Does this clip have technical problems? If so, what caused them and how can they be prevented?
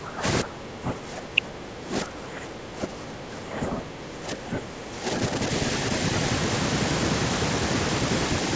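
Yes. The speech is pulled down from 0.00 to 0.24 s and again from 0.42 to 5.5 s, dropping by roughly 15 dB at its deepest and thinning out in pieces. This is speech suppressed in double talk, likely because the far end was talking at the same time and the echo canceller could not tell the near talker from loudspeaker echo. Using a headset or a better-tuned echo canceller with proper double-talk detection prevents it.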